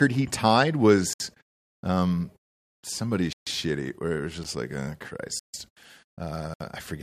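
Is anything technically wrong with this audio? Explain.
Yes. This speech has five blocks of digital silence: 1.13–1.20 s after "he tied", 3.33–3.47 s after "um somebody", 4.44 s, 5.39–5.54 s after "like oh", and 6.54–6.60 s. The sound cuts abruptly to silence, leaving holes of about 65 to 146 ms plus one 12 ms tick. The waveform shows flat silent stretches, and the spectrogram shows empty gaps bounded by thin broadband vertical stripes.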